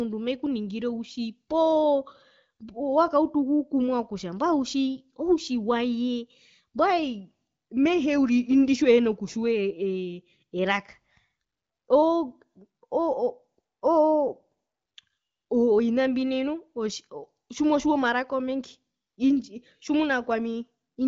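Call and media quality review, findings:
No faults found; HD Voice path working normally.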